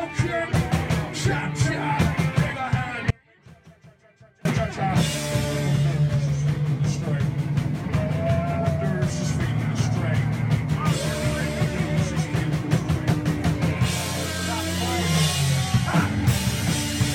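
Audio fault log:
3.11 to 4.45 s: audio dropout to a faint residue. The signal cuts out abruptly for about 1.35 s and returns just as suddenly. The gap is not silent. A faint leak of the sound remains, roughly 30 dB below its normal level. That residue is what marks this as a break in the wanted signal. It is not a pause or a fade. The likely cause is a momentary loss on the feed while the path after the break stayed live.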